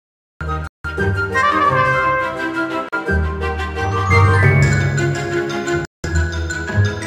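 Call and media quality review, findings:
Music enters abruptly at 0.41 s out of digital silence, no attack or fade. Cut-off start: capture or stream began late, mid-sound.

Music drops to silence at 0.67 s (171 ms), 2.89 s (39 ms) and 5.85 s (189 ms), then resumes. Bluetooth stall, likely interference delaying packets until the headphone buffer ran dry.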